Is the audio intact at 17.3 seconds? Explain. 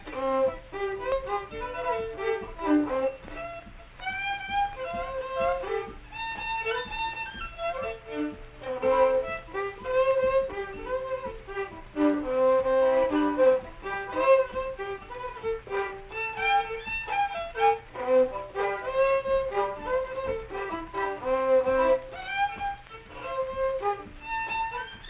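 Yes, the audio is intact at 17.3 seconds, with no fault at that moment.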